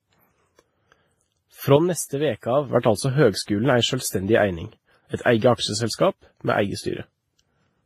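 The whole clip has layered codec artefacts and nothing above 15.2 kHz, likely transcoding between lossy codecs, with a low-rate WMA pass fitting about 24 kbit/s before Vorbis. At 1.77 s there's a sudden gain jump: sound and background drop together by about 7 dB, probably from an unramped gain change, recovering at 2.69 s.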